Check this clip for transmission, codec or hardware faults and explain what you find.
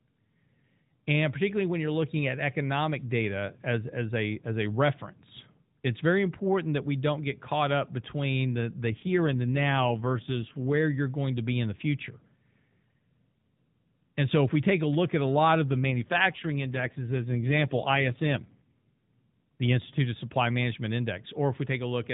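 Two faults, both an AMR rate drop, at 8.90 to 10.74 s and 15.72 to 19.32 s. In each, the speech turns rougher, buzzier and more synthetic, with no gap and no change in bandwidth, then recovers. This fits the mobile link switching the AMR narrowband codec from 12.2 to 5.9 kbit/s to protect a weak connection.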